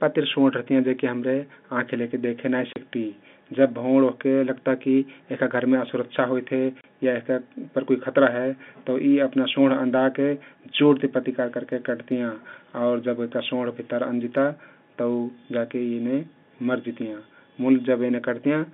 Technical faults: packet loss filled with silence

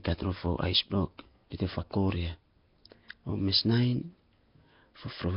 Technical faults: Nellymoser compression

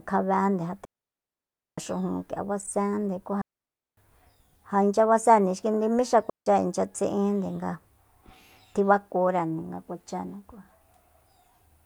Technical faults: digital wireless dropout

